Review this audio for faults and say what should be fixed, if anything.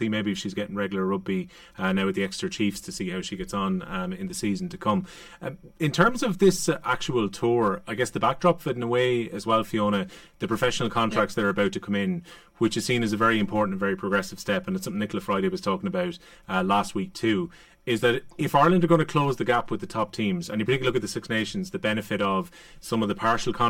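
Channel delay (comb filtering) runs throughout the speech: one channel lags the other by around 5 ms before the mono sum, so matching content cancels at evenly spaced frequencies starting near 100 Hz and repeating roughly every 200 Hz. The voice sounds hollow and phasey, and a spectrogram shows fixed dark horizontal notch bands. Align the channels or record in true mono before summing to prevent it.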